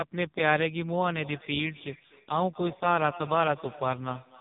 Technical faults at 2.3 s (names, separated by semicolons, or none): AMR narrowband mobile codec; feedback echo between two devices